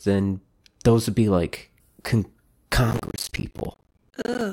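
From 2.91 s to 4.41 s the processor falls behind and misses buffer deadline after deadline, a pattern that fits buffers of around 10 ms, with roughly seventy going unfilled across that stretch. This is processor overload crackle. Each missed buffer drops out as a short, hard-edged gap of silence cut into the speech, and strung together they form a gritty, tearing crackle over the last second and a half. It stops at 4.41 s as the load eases.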